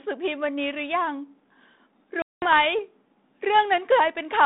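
At 2.22 s the speech cuts to a hard-edged silence of about 200 ms, then returns slightly distorted until about 2.46 s. This is packet loss on an ADPCM call, fitting roughly ten lost packets: the silent fill desynchronised the decoder's adaptive predictor and step size from the sender's, so they took tens of milliseconds to realign. The 32 kbit/s G.726 line, passing 200 Hz to 3.7 kHz, adds only light coding roughness.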